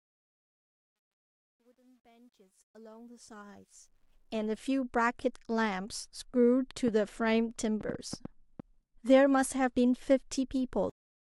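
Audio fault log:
0.00–4.65 s, truncation distortion on a fade: the fade-in rises from gritty steps, harshest until about 3.03 s, because the quiet part has too few bits and no dither, which fits an 11-bit stage. Unlike hiss, the grain follows the level and vanishes as it rises.
6.88–8.61 s, train of clicks: about seven similar clicks at an uneven pace of roughly 3.5 per second, peaking around 5 dB above the sound, likely from electrical interference or a faulty connection. They repeat with the same shape, unlike random crackle.
10.90 s, cut-off end: the sound stops mid-event and drops straight to digital silence, with no decay, because the final buffers were never written. The edge is abrupt, not tapered, which separates it from the smooth fade-in at the start.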